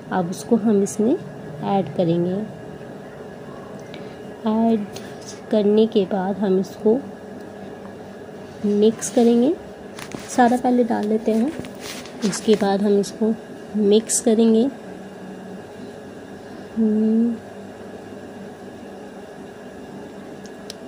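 No technical faults are audible anywhere in this recording.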